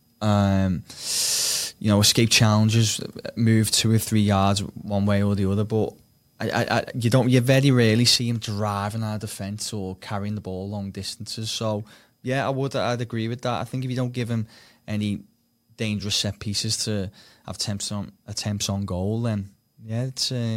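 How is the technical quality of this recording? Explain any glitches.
The recording has one clear fault: one channel drops out partway through and never recovers. From 8.16 s, just after "don't you very rarely", to the end of the clip, the level falls abruptly by about 6 dB. The likely cause is loss of one side of a stereo feed. Once the two channels are summed to mono, the speech common to both is carried by one channel alone, so it sounds suddenly quieter, and anything present only in the lost channel disappears.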